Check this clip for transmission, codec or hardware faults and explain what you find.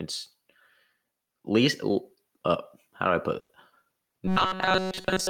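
Three faults stand out in this speech clip: gain pumping throughout, a burst of packet loss near 3.4 s, and robotic sound from repeated short buffers at the end.

Gain pumping runs through the whole clip. The input gain is likely set far too high for the microphone, so a fast limiter or compressor keeps clamping down on every loud syllable and releasing in the pauses. The level swings by around 10 dB. Loud and quiet passages sit unnaturally close together, and the speech sounds flattened and breathing.

The burst of packet loss comes just after "how do I put", from 3.39 to 3.51 s. Several consecutive packets never arrived in time, so the receiver covered the hole by extending the last sound for about 100 ms and fading it down. That leaves a short held, decaying tail, then roughly 60 ms of silence. When the audio comes back, about 100 ms of speech has been skipped, and the sentence jumps forward.

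Robotic sound from repeated short buffers starts at 4.28 s and lasts until the clip ends at 5.30 s. New audio is likely arriving too rarely, so the playback side keeps looping its last tiny slice of sound while the real signal is dropped. Most of this stretch is repetition rather than fresh audio. The loop imposes a steady 188 Hz buzz, which fits a buffer of roughly 5 ms. The speech becomes a rigid metallic drone that only loosely follows the syllables.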